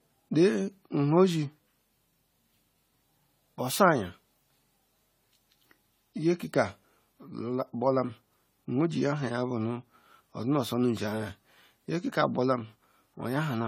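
Throughout the speech, a swirly, hollow smear blurs consonant attacks, likely generation loss from about ten lossy re-encodes, consistent with AAC at around 64 kbit/s.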